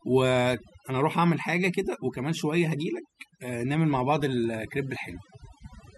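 From start to finish the clip carries overdone noise removal: a noise reduction stage was set far too aggressively, so any frequency band sitting near its noise estimate gets pulled down hard or switched off entirely, and the softer parts of the speech are caught along with the noise. The background between phrases collapses to near silence scattered with twinkling specks.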